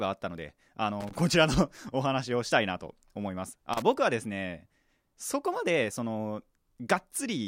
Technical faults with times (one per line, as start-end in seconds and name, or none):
1.00-1.16 loose connector crackle
3.73-3.82 loose connector crackle